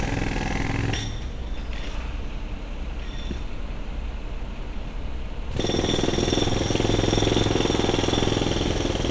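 No technical faults can be heard anywhere in the recording.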